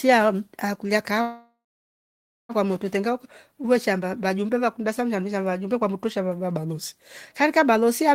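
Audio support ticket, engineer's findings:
Call audio freeze, 1.21–2.52 s: last sound held as a fading buzz, then 0.92 s silence; resumes where it stopped, nothing lost, 1.28 s delay added. Likely jitter buffer underrun, packets held. Spectrogram: smeared band tapering into blank gap.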